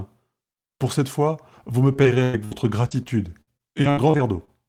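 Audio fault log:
1.93–2.53 s, repeated packet loss (robotic sound): just after "cette fois vous me", four gaps, the longest about 0.1 s, are bridged by stretching the last received sound. That fills about a third of the stretch, so the speech turns choppy, with pieces missing.
2.89–4.50 s, repeated packet loss (robotic sound): nine shorter gaps, none over about 60 ms, follow in quick succession, and each is patched by carrying the previous sound forward. About a sixth of the span is filled this way, leaving a choppy, stuttering texture.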